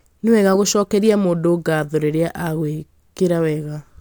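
Speech recording with no audible technical faults.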